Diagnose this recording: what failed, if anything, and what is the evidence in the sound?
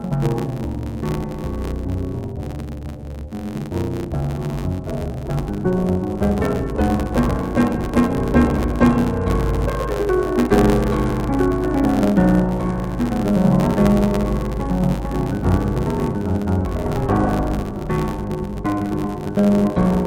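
The music here has a dull, robotic quality the whole way through, with a steady buzz sitting at roughly 94 Hz. That's the classic sign of interleaved audio read as planar, a sample-format conversion fault at the buffer hand-off. Each block of alternating left-right samples gets split in half, first half treated as left, second as right, so both channels play at half speed inside each 10.67 ms block, which fits a 512-sample buffer. The blocks are too short for an octave drop to come through, so you get the block-rate buzz and smeared tone instead.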